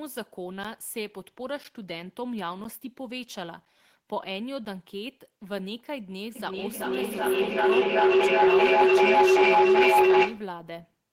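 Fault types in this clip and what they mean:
Periodic USB or driver dropouts: something stalls the audio path once a second, punching roughly five short silent gaps of around 10 ms into the speech as regular ticks.
Feedback howl: a mic-to-speaker loop keeps gaining, building a tone near 400 Hz with a loop repeat of roughly 0.4 s, peaking about 14 dB over the speech.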